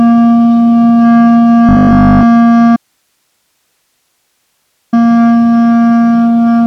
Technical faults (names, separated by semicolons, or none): robotic sound from repeated short buffers; audio dropout to a faint residue